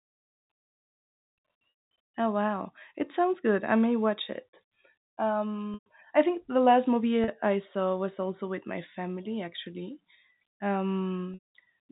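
Speech, carried in telephone-band G.711 coding with nothing above 4 kHz. Packet loss with pitch repetition bridges gaps at 1.7–1.8 s, 5.74–5.86 s just before "I think the last", 7.24–7.28 s between "think the last movie" and "I saw was also", and 11.34–11.39 s. The short one at 7.24 s sounds like a briefly held, buzzy tone; the longer ones fade into silence before the speech returns with a short cross-fade.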